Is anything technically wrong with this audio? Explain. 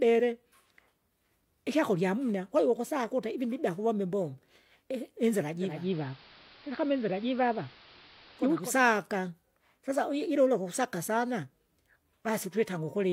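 Yes. From 5.53 s to 8.76 s there is digital radio blending to analogue: the receiver lost its digital stream and cross-faded, over about 0.41 s, to the station's AM broadcast, then back. AM carries little treble, so the speech turns dull and muffled for that stretch, with a hiss floor sitting roughly 25 dB under the voice. The level holds steady through both blends, so the change is heard as lost treble and added noise rather than a jump in loudness.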